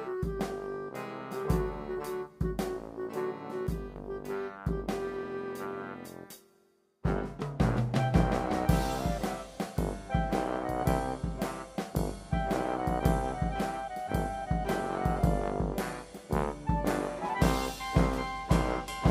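At 3.67 s there's a sudden gain jump, with the sound and background dropping together by about 6 dB until 3.96 s, likely from an unramped gain change.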